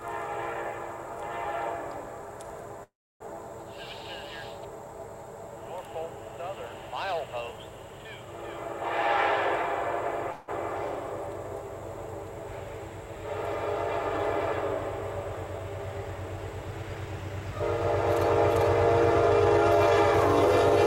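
At 2.83 s there's a call audio freeze: the last sound stretches into a fading buzz and then about 300 ms of silence before carrying on at 3.35 s. A shorter one at 10.32 to 10.50 s just fades without going silent. Both likely come from delayed packets draining the jitter buffer. Nothing gets lost, but the gaps push everything later.

From 15.00 to 17.41 s the jitter buffer speed-up kicks in, trimming tiny pitch-period slices to shed around 150 ms. The audio runs about 6% fast at unchanged pitch, so it feels a bit rushed.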